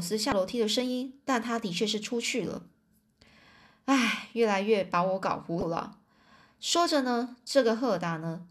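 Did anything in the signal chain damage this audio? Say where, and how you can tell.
Yes. At the codec stage, damaged data in a compressed stream causes short glitches at 0.29–0.32 s and 5.59–5.63 s as the decoder loses frame sync.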